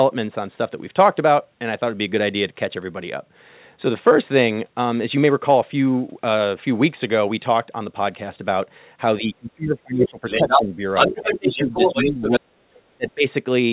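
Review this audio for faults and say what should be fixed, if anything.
The speech dips and breaks up from 9.2 to 10.24 s, 10.43 to 10.78 s, 11.08 to 12.22 s, 12.38 to 12.65 s and 12.97 to 13.25 s, dropping by roughly 10 to 40 dB at worst. This is likely speech suppressed in double talk: the echo canceller mistook overlapping talk for echo and attenuated it.

A second voice cuts through from 10.01 to 10.09 s, 10.25 to 10.63 s and 10.94 to 12.4 s, about as loud as the talker and briefly louder. This is likely the other side's voice leaking through, loudspeaker sound the echo canceller left in the microphone signal.

Use a headset or better acoustic separation, and tune the echo canceller's double-talk detection so it stops treating near-end speech as echo.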